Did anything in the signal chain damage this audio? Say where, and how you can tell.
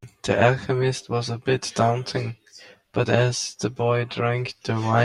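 Yes. Throughout the speech there is channel delay, producing comb filtering, most likely at the driver or buffer stage where the stereo pair is folded to mono. One channel arrives around 10 ms late, so when the two are summed, shared content cancels at evenly spaced frequencies, with the first notch near 50 Hz and further notches stacked above it. The sound is hollow and phasey. Unlike room reverb or a flanging codec artefact, these notches stay fixed.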